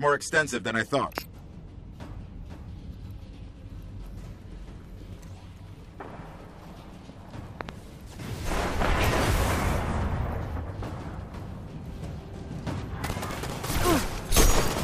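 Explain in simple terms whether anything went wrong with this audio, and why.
Loud pops at 1.18–1.20 s, 7.61–7.71 s (a quick double) and 8.85–8.87 s: brief electrical jolts, likely from a plug, switch or static, burst over the continuing sound.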